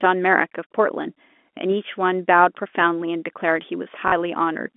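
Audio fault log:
4.08–4.12 s, packet loss with last packet repeated: about 40 ms of the stream was lost, which fits two 20 ms packets, and the receiver replayed the last good one. The repeats buzz near 50 Hz, a brief robotic stutter within the narrow telephone band.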